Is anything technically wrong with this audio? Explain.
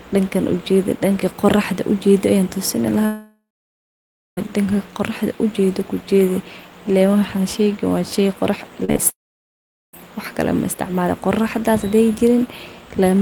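Yes. The speech has two kinds of network fault.

A long network dropout runs from 3.05 to 4.39 s, and another from 9.10 to 9.99 s. The likely cause is audio packets that stopped arriving for over a second, then for almost a second. The receiver stretches the last sound into a fading buzz. Then there is silence, about 0.95 s in the first gap and 0.78 s in the second. Speech returns with the missing stretch gone.

Short concealed packet loss comes just before the second dropout. It hits at 8.85 to 8.90 s, 8.92 to 8.97 s and 8.97 to 9.00 s. Each hole is 20 to 40 ms of audio that reached the decoder too late. The decoder patches it by extending the previous sound, then blends back in. The result is a quick smear or wobble, and a brief sound can drop out.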